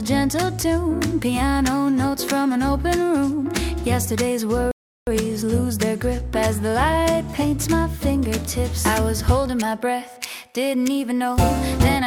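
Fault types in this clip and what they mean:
Rebuffering stall: at 4.71 s the sound drops into silence for about 0.36 s, then picks up at exactly the point it left off, with nothing skipped. The player exhausted its downloaded audio and paused until more data arrived, lengthening playback.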